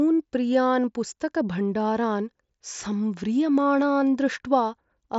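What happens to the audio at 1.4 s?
At 1.4 s the speech carries on intact, with no dropout, glitch or other fault at that moment; the Bluetooth mSBC headset link is working normally there, with the sound stopping at about 7.7 kHz.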